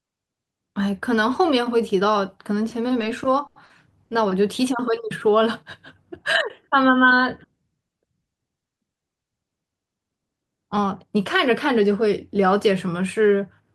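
At 3.47 to 3.58 s and again at 3.66 to 3.72 s, the speech hits a short stall from a late packet. The jitter buffer ran dry, so the receiver held the last sound for about 90 ms, then 40 ms, with a faint buzz or dip. Nothing is lost, but playback falls further behind each time.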